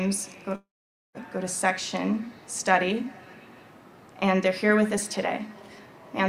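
From 0.55 to 1.18 s the sound breaks off. For roughly a tenth of a second it continues as a fading buzz, and then there is about 0.49 s of silence before the audio resumes with around 0.6 s of material gone. This is likely a long network dropout, with the receiver stretching the last sound until it gave up. A brief packet loss would be masked smoothly. A clean edit or mute would stop abruptly, without the decaying smear before the silence.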